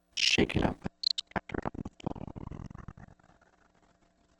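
At 0.83 s the sound abruptly loses its top end and takes on a thin, smeared quality that lasts to the end of the clip, with nothing audible above 8.2 kHz and no gap at the switch. This is an adaptive stream at a lower bitrate: the player dropped to a cheaper encoding mid-stream, one that fits a step down from around 64 to 16 kbit/s Opus, so the encoder discarded high frequencies and coded the rest more coarsely.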